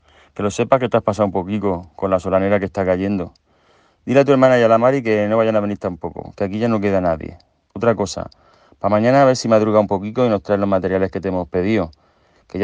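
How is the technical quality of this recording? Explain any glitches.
No technical glitches can be heard anywhere in the recording. There is nothing in it that calls for an explanation.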